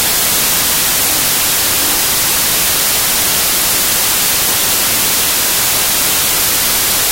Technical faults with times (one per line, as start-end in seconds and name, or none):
0.00-7.12 wrong sample width